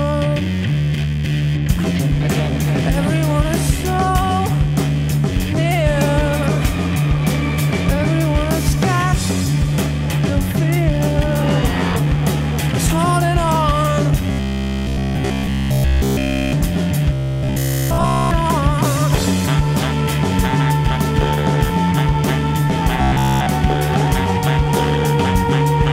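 Robotic sound from repeated short buffers appears from 14.31 to 16.53 s, 17.13 to 18.31 s, and 23.02 to 23.46 s. Each is a rigid, metallic 66.7 Hz buzz, likely from a 15 ms buffer looping while nearly all new audio is skipped.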